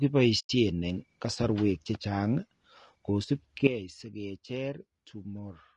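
The speech has a rough, grainy texture from start to finish, with noise filling in between the harmonics and a thin, somewhat synthetic top end. That's plainly audible low-delay AAC compression, likely AAC-ELD, whose short frames resolve pitch poorly and sound starved at around 32 kbps.

From 0.39 to 0.50 s there's AAC frame loss with muting. The sound fades out softly into a hole of about 100 ms, which fits around five lost frames zeroed by the decoder, then fades back in as the overlapping windows recover.

At 3.67 s a sudden gain jump drops the level by about 12 dB in a single step. Voice and background noise fall together and stay down through to the end, likely a gain change applied with no ramp.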